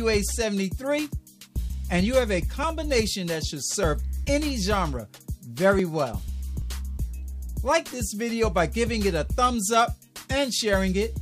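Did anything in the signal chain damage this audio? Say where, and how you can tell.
Yes: a likely dropped buffer (overrun) at the driver/buffer stage gives small forward skips at 3.83, 5.79 and 10.16 s, each losing about 10 ms.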